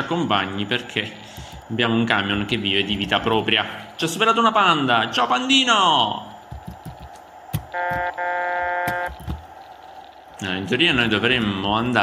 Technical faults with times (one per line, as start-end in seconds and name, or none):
none